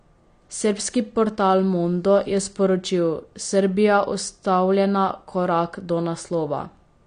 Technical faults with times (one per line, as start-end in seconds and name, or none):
0.00-7.07 AAC compression